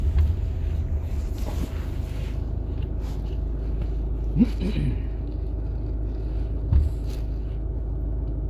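No technical faults can be heard anywhere in this recording of sounds.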